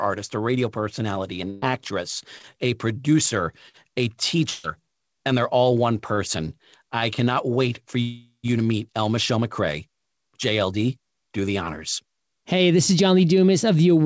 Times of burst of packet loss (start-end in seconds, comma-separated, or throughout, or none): 1.50-1.64, 4.50-4.65